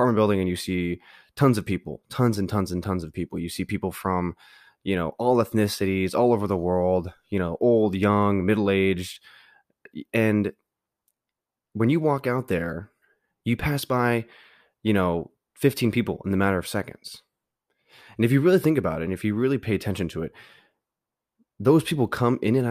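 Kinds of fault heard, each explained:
No kinds of fault are heard in this speech recording.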